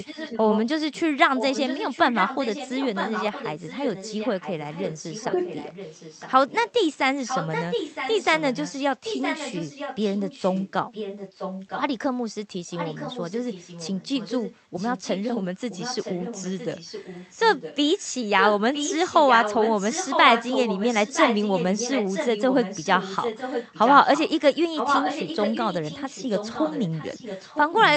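Speech with an echo leak running almost throughout: a delayed copy of the voice trails about 0.96 s behind at 0–1.01, 1.36–6.73, 7.25–11.82, 12.7–17.76 and 18.37 s to the end. It's loudest at the start and end, quieter in between, and likely comes from a far-end echo canceller letting loudspeaker pickup through.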